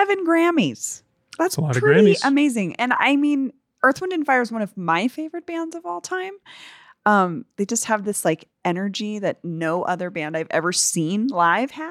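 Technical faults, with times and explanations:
No technical faults can be heard in this recording.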